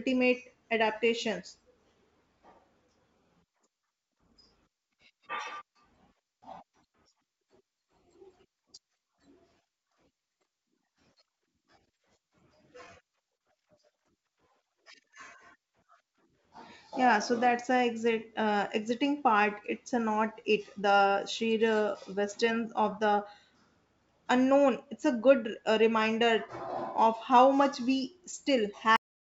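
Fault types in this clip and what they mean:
Repeated stalls (stutter): Between 12.78 and 13.42 s the jitter buffer ran dry four times, and the receiver stretched the last sound to fill about 59 ms, the longest gap 34 ms. Nothing is lost, but speech drags. A spectrogram shows brief smeared, repeated frames.
Cut-off end: At 28.96 s the speech stops in the middle of a sound because the final buffers were never played out. The waveform drops straight to a flat line of digital silence with no decay, and the spectrogram goes abruptly blank.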